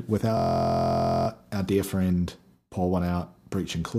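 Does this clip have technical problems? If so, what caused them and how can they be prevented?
Yes: a system hang loop from 0.37 to 1.28 s, just before "our dear friend". The machine stalled while the sound hardware kept replaying one 23.2 ms slice, which fits a 1024-sample buffer, producing a steady 43.1 Hz buzz. Keeping audio threads real-time and drivers current prevents this.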